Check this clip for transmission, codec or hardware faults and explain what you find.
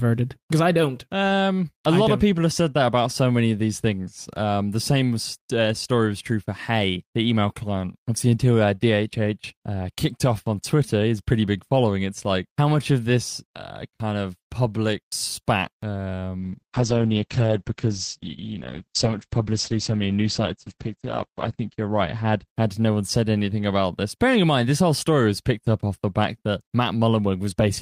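One transmission fault stands out: a call bitrate drop from 16.38 to 23.31 s, ending just before "about this bearing in". The call's bandwidth estimate collapsed and the encoder was forced onto a much smaller bit budget. The sound suggests a fall from roughly 32 kbps to about 9 kbps, bottoming out for about 5.1 s. Starved of bits, the codec quantises coarsely and narrows its audio band from 20 kHz to 8 kHz, so the speech turns muffled and rough, with a watery texture until the rate recovers.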